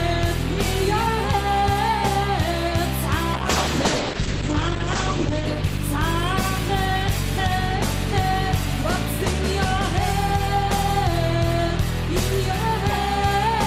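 From 3.34 s to 7.09 s there is a call bitrate drop: the encoder was starved of bits, so it coded the sound coarsely and narrowed its bandwidth from 20 kHz to 8 kHz. The result is muffled and watery, and the roughness is consistent with a fall from around 48 kbps to roughly 9 kbps. The worst stretch lasts 1.69 s. Unlike packet loss, nothing drops out or stutters. The degradation is continuous and clears again before the clip ends.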